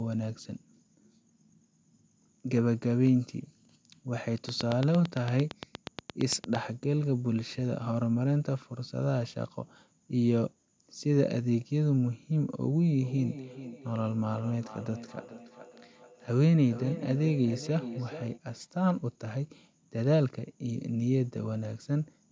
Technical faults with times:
4.49-6.56 train of clicks
12.99-18.42 feedback echo between two devices

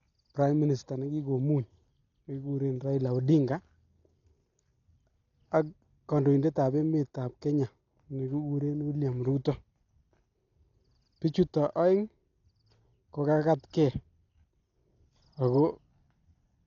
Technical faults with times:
0.00-16.67 Dolby Digital compression

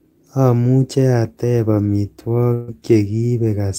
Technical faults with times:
2.53-2.70 burst of packet loss

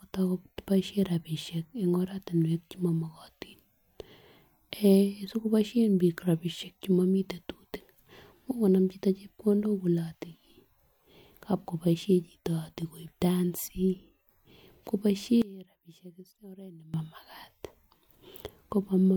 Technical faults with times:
15.42-16.94 one channel inverted

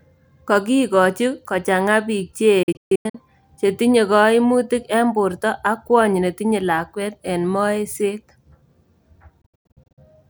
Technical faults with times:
2.63-3.15 Bluetooth dropout
9.41-9.98 Bluetooth dropout

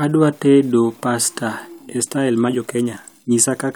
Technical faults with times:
1.62-3.75 time-stretched section

